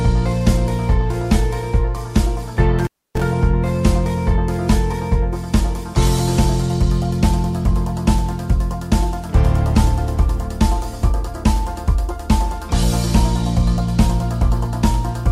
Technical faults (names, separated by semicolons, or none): intermittent contact